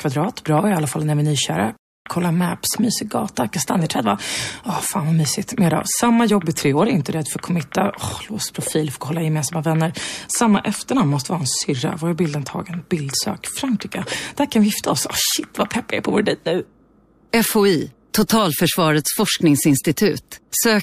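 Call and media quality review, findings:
Playback stall, 1.77–2.06 s: output goes fully silent for about 290 ms mid-flow, then resumes. Likely a player-side buffer underrun or blocked playback thread. Unlike a network packet-loss gap, nothing is concealed. There is no smeared fill, just clean silence and continuation.

Pre-echo, 3.35–3.37 s and 18.27–18.29 s: short hiss, about 20 ms and 22 ms, rising about 13 dB and about 15 dB ahead of sharp attacks, which sound softened. Transform codec quantisation noise is spread across a block about 36 ms long, consistent with no switch to short blocks on transients. Distinct from reverb or echo: the noise comes before the attack, not after.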